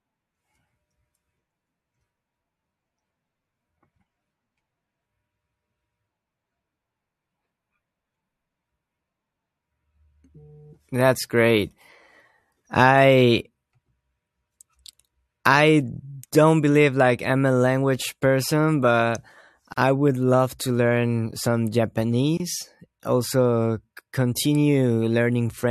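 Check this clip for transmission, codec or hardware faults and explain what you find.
Two short dropouts break the continuous speech, both gaps at a join of encoded pieces. The first runs from 19.73 to 19.78 s, about 43 ms of silence; the second from 22.37 to 22.40 s, about 27 ms. Each cuts in abruptly, with edges softened by the codec, and the speech resumes exactly where it stopped. The cause is separately encoded segments joined untrimmed, leaving encoder start-up delay and last-frame padding in the stream as silence.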